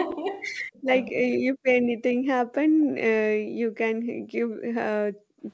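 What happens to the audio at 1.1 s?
From 1.08 to 1.5 s, the speech sinks sharply. It drops by something like 40 dB at its deepest and breaks up over roughly 0.4 s. This is speech suppressed in double talk. The likely cause is both ends talking at once. The echo canceller then cannot tell the near talker from the loudspeaker echo. It turns everything down together, so the voice dips and cuts out in pieces.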